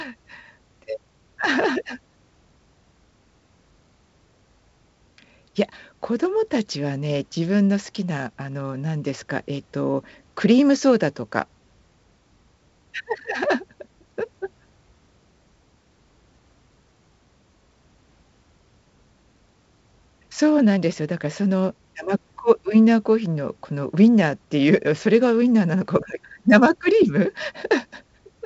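Speech carried over G.722 wideband telephone coding at 56 kbit/s, band-limited to about 7.8 kHz with light coding texture, and no faults are present.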